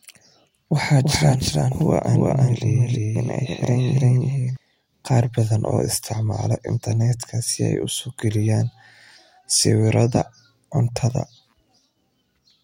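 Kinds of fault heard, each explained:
Doubled audio track: from 1.03 to 4.57 s, an equally loud, dry copy trails the speech by roughly 300 ms, likely from a slower second capture path.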